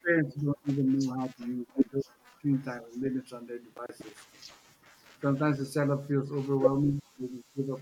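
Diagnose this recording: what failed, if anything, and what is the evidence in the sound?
Call processing stage. Speech sinks deeply from 0 to 2.43 s, mildly at 5.18 to 5.72 s, and deeply again from 6.72 s to the end. This is likely speech suppressed in double talk, where the echo canceller ducks the near talker along with the loudspeaker echo.

Driver or buffer stage. Processor overload crackle runs from 3.74 to 4.10 s. A rapid string of short silent gaps fits roughly ten missed buffers of about 10 ms each.

Call processing stage. The room background dips by about 14 dB from 4.59 to 4.84 s, then returns. This is background gated by the echo canceller, which clamped the microphone while the loudspeaker played.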